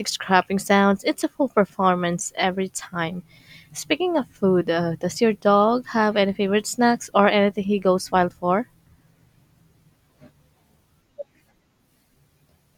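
Listening to this speech recording, nothing technically amiss stood out at any point.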